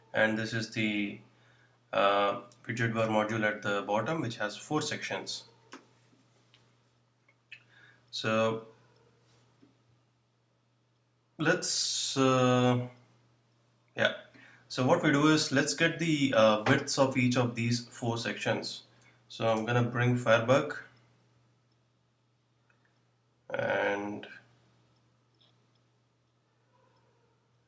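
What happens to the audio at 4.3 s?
Nothing goes wrong at 4.3 s; the audio carries on intact through that moment with no audible fault.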